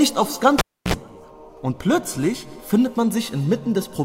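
Cable pulled and plugged in, 0.59 to 0.94 s: pop, 300 ms of near silence, 54 ms of 60 Hz mains buzz as only the tip touches, then a return pop.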